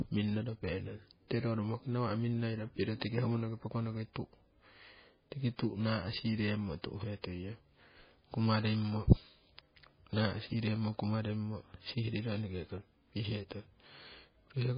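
The whole clip has nothing above 5 kHz and a watery, swirly smear on the speech, likely MP3 compression squeezed down to something like 16 kbps.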